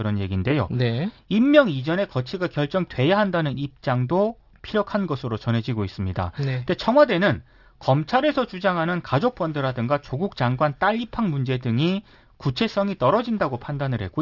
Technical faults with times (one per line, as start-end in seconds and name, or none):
0.00-14.22 aliasing